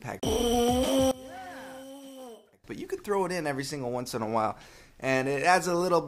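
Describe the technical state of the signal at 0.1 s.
At 0.1 s the signal is intact, with no audible fault at that moment.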